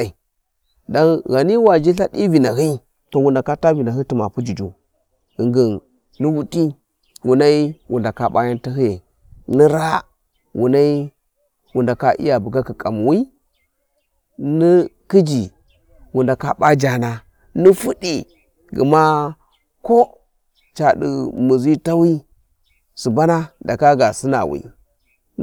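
It's a speech recording with two brief spots of hard clipping, where the level runs past what a stage in the chain can pass and the peaks get sliced flat. The first, at 1.67 s, overshoots by only about 1 dB and is a brief crackle. The second, from 17.66 to 17.70 s, overshoots by about 3 dB, and those squared-off tops throw harmonics well up the spectrum, so you hear a short crackly burst on that peak.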